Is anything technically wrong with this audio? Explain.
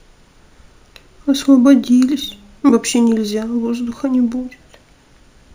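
Yes. Throughout the speech there is imaging from linear upsampling: straight-line interpolation from 16 kHz to 48 kHz mirrors the spectrum into 8–16 kHz, about 30 dB down, giving sibilants a metallic shimmer. A spectrogram shows the band reflected above 8 kHz.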